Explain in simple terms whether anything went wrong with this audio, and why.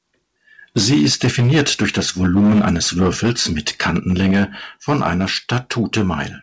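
The microphone input was likely set too high, causing microphone overload: the loudest moments hit the recording limit and their tops get cut off. This gives a harsh, crackly edge from 0.76 to 4.43 s, again from 4.89 to 5.24 s, and more mildly from 5.52 to 6.14 s.

The call software then stepped the microphone volume down, likely reacting to that overload. You can hear two sudden drops in loudness, at 0.78 s and at 4.31 s.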